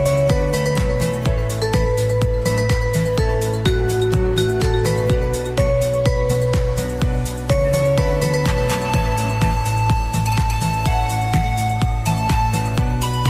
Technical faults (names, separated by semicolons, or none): none